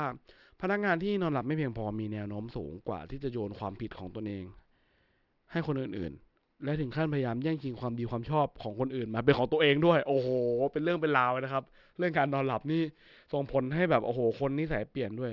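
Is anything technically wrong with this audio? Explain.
Yes. The speech carries aliasing from start to finish. The audio fits a drop to a 12 kHz rate without a proper anti-alias filter first. Content above 6 kHz folds back into the band, sitting roughly 30 dB down, so sibilants sound gritty and metallic.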